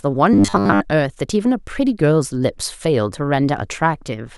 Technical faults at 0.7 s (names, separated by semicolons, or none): robotic sound from repeated short buffers